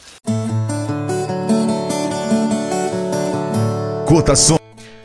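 No technical faults are audible.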